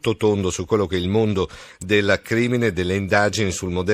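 At 1.81 s a sharp snap cuts across the speech, a brief electrical switching spike peaking at about -20 dBFS. On the waveform it is a thin, isolated spike; the spectrogram shows a narrow vertical streak spanning all frequencies. A nearby switch or discharge arcing into the line is the likely cause.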